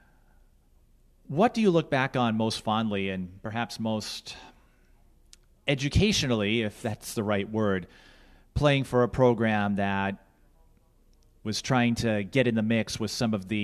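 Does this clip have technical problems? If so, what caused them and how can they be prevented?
No, there are no technical problems in this recording.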